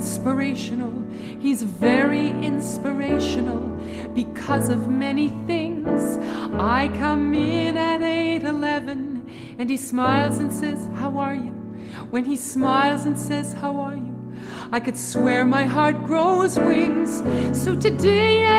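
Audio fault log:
No fault is logged for this audio.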